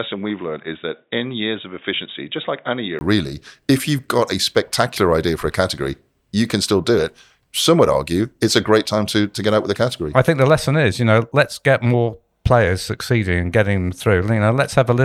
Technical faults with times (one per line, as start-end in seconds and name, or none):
0.00-3.01 input switched to a poorer device